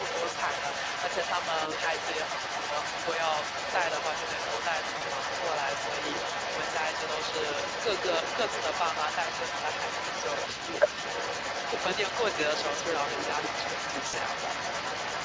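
From the start of the clip to its end at about 15 s, a second voice runs underneath the main talker, only a little quieter than it. It is likely the other side's voice leaking through: the far end played on a loudspeaker and was picked up again by the microphone, with the echo canceller leaving much of it behind. It sounds like another person in the call, not like reverberation of the main talker, because it carries separate speech with its own timing.

At 4.97 to 5.02 s and again at 14.07 to 14.15 s, the sound briefly smears into a stretched, fading sound. This is VoIP packet loss concealed by the speech codec. About 40 ms is lost at the first point and 60 ms at the second, which fits two and three 20 ms frames. The decoder fills each gap by extending the last pitch and spectral shape at falling gain, and the level stays weak for a moment after the stream returns. A plain dropout would give silence or a click, not this stretched sound. 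The band tops out at 8 kHz, as the call's processing allows.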